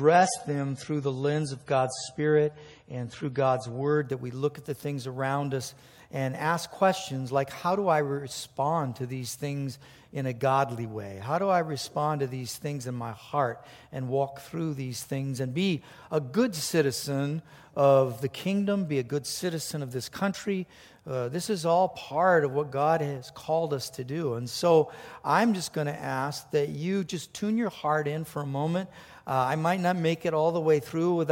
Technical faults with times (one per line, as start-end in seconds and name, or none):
0.00-4.00 adaptive stream starting at a low bitrate